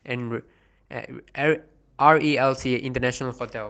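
No technical faults occur at any point in the speech, so there is nothing to describe in time order.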